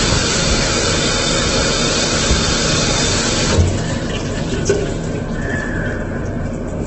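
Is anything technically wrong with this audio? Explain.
Yes, throughout the clip there is heavy damage that is likely Opus compression in its music mode. Nothing sounds above 8.1 kHz, and bands are filled with folded or noisy energy, so tones turn grainy and rough rather than swirling as with MP3. The damage fits a bitrate near 12 kbps.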